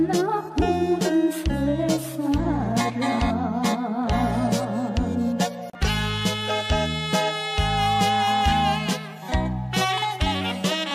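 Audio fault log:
7.24 to 8.86 s, loudspeaker feedback squeal: a steady tone at 802 Hz swells up over roughly the first 0.7 s and ends up sitting about 5 dB above the rest of the sound. That's the mic hearing its own speaker, with the loop gain tipping past one at that frequency so it keeps feeding itself until the loop gets broken.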